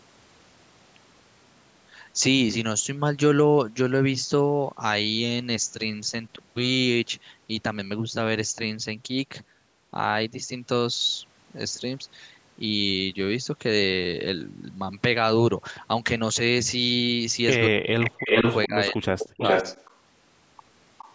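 The clip is speech, and it shows speech suppressed in double talk. At 6.36 to 6.41 s the voice dips briefly and only slightly, by about 5 dB. At 17.68 to 18.34 s it drops much harder, by about 40 dB, losing roughly half a second in pieces. At 18.67 to 19.64 s it cuts out again by about 40 dB, in chunks totalling under half a second. Both sides were likely talking at once, and the echo canceller turned both down. An echo leak runs from 18.0 to 19.95 s. A copy of the voice returns 413 ms late, at roughly the same level as the speech itself. A loudspeaker on one side was likely feeding its microphone without full cancellation. A fainter return, about 20 dB down, repeats from 20.98 s to the end. The call's microphone processing stops the content at 8 kHz.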